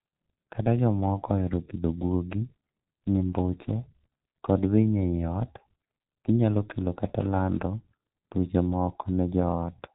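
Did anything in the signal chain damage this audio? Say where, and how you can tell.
Yes. The damage comes from the codec stage, where the speech has been through G.723.1 coding for the whole clip, with heavy damage throughout. Nothing above 4 kHz survives, so the speech is muffled, and the slowly updated voice model smears transitions, leaving consonants blurred and the voicing hoarse. The 30 ms frames and this degree of loss fit a low-rate setting of around 6.3 kbit/s, where too few bits remain to describe the spectrum in detail.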